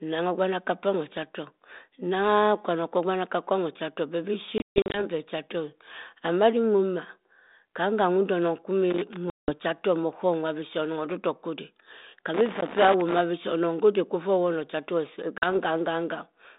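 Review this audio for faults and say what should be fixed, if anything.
Packet loss on an ADPCM call occurs at 4.58 to 5.0 s (240 ms missing, scattered across 360 ms, longest run 140 ms), 9.3 to 9.53 s (180 ms) and 15.38 to 15.48 s (40 ms). Silent, hard-edged holes replace the lost packets. Afterwards the decoder's adaptive predictor and step size no longer match the sender's, so the speech comes back distorted until it settles. A clean gap followed by a brief recovery distinguishes this from connector crackle. Jitter buffering with packet loss concealment, or a more reliable link, would prevent it.

Loose connector crackle occurs at 8.91 to 9.16 s and 12.34 to 13.19 s. A worn or dirty contact repeatedly makes and breaks as it moves, chopping the signal into an irregular, scratchy burst. Unlike packet loss, it leaves no clean silent gap and no settling afterwards. Cleaning or replacing the connector and securing the cable would prevent it.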